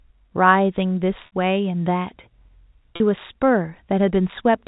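At 1.26 s and again at 2.96 s, packet loss with pitch repetition: lost packets, about 60 ms then 40 ms, were bridged by repeating the last pitch period, giving a briefly held, buzzy tone before the speech resumes through the narrow G.711 telephone band.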